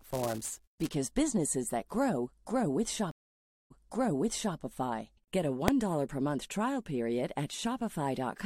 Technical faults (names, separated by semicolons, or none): buffer tearing; stream reconnect; invalid numbers at full scale